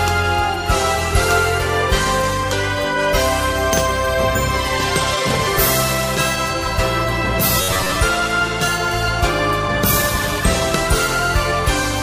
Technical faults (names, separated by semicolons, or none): robotic sound from repeated short buffers